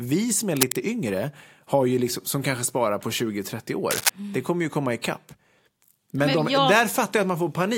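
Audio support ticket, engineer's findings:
Cable scratch noise at 0.56–0.78 s, between "som är" and "yngre har ju liksom", and at 3.91–4.10 s. Dense scratching bursts, about as loud as the speech. Likely a worn cable or connector shifting contact resistance.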